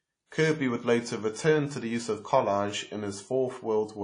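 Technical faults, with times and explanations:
Throughout, WMA compression: speech sounds ringing and washy, hiss breathing with it, likely a long-block transform codec starved at something like 32 kbps.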